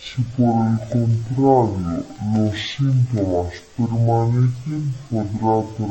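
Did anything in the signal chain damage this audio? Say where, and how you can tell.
Yes. The fault sits at sample-format conversion, where the file's channel layout was misread: stereo read as mono. For the whole clip the speech runs at half speed and an octave low. Interleaved left and right samples were played in sequence as one channel, doubling the length. A faint mirrored copy shows in the upper spectrum.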